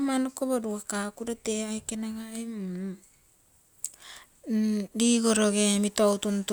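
No technical faults can be heard anywhere in the recording; the signal stays continuous and steady at a consistent level throughout.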